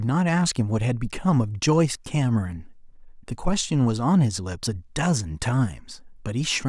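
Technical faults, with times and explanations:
No technical faults can be heard in the speech. Nothing in the recording calls for a time or an explanation.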